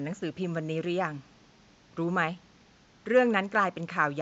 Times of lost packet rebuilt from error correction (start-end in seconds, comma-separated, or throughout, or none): none